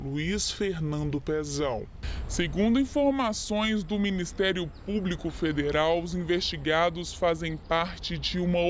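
From start to end, the sound is slow, dragging and about five and a half semitones low: a wrong sample rate, with playback at roughly 0.73 times the original speed, which fits 22 kHz material played at 16 kHz.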